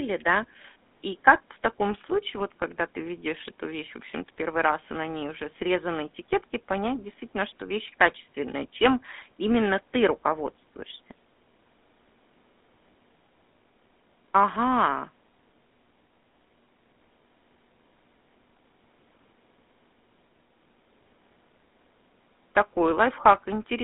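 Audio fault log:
Throughout: GSM full-rate codec, a buzzy, gravelly roughness from pulse-driven vocal-tract coding; spectrogram shows a line band of 200 Hz to 3.6 kHz, nothing above 3.8 kHz.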